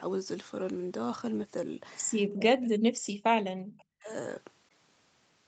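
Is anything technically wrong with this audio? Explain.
Yes. The speech is suppressed in double talk twice, from 2.32 to 3.07 s and from 3.75 to 4.1 s. In both spans the voice drops very deeply, by roughly 40 dB. This is likely an echo canceller meeting two people talking at once. It cannot separate the near talker from the far-end echo, so it turns everything down. The call codec's 8 kHz upper limit holds throughout.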